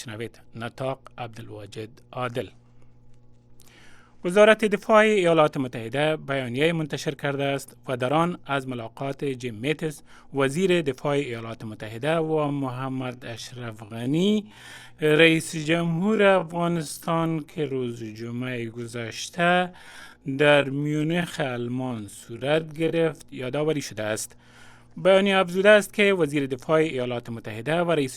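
A steady mains hum sits under the whole thing at 60 Hz, well below the main signal, probably a ground loop or a nearby transformer leaking the power line in. From 12.2 to 23.2 s the pace suddenly drops to about 0.57 times normal speed while the pitch stays put, so it drags, most likely a time-stretched section.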